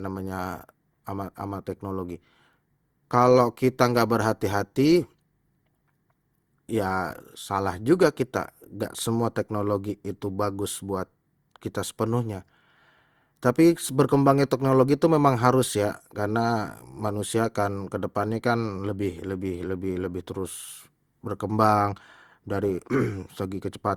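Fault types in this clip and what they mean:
Generation loss: throughout the speech there is a swirly, smeared, hollow quality, with consonant attacks blurred, more than a single lossy encode would leave, even though content reaches up to about 20.2 kHz. The likely cause is repeated decoding and re-encoding, around seven passes, each quantising on a shifted frame grid so the noise builds up; the character fits an Opus chain at 64 kbit/s.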